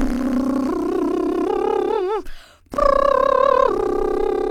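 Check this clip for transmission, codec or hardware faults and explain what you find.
No transmission, codec or hardware faults.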